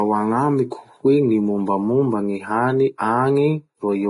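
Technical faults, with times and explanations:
Throughout, Vorbis compression: the speech is hissy and grainy below a hard ceiling near 10.6 kHz, with roughened tone and softened consonant onsets. This is likely heavy low-bitrate Vorbis coding, near 27 kbps, replacing fine treble detail with similar-energy noise.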